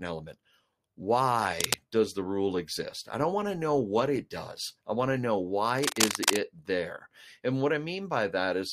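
From 1.60 to 1.79 s, just before "does the rule exist", a burst of cable scratch noise cuts across the speech. It sounds like rough scratching, about as loud as the speech itself. A worn cable or connector being moved is the likely cause. Its contact resistance jumps erratically and injects ragged noise. It returns from 5.78 to 6.36 s, between "i want to know" and "there and what". This time it lasts longer, over half a second.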